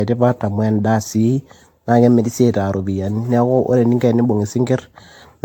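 A speech recording with generation loss audible for its whole length. The sound is swirly and hollow, with a smeared, watery texture and softened consonant attacks, more degraded than a single pass at this quality would leave it. Nothing is present above 18.6 kHz. The likely cause is repeated lossy re-encoding, on the order of seven passes through an AAC-LC chain consistent with 96 kbit/s, each pass re-quantising on a shifted frame grid so noise and spectral gaps accumulate.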